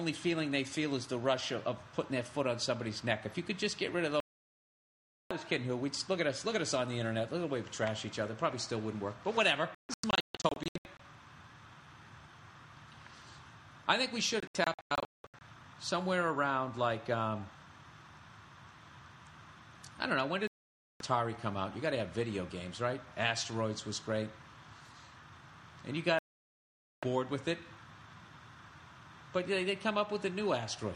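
Digital broadcast dropouts at 4.20–5.31, 9.75–11.00, 14.40–15.42, 20.47–21.01 and 26.19–27.03 s. The receiver mutes failed frames, so sound cuts cleanly to silence, in short scattered holes near 10 and 15 s. It resumes later with nothing filled in, unlike a noisy analogue fade.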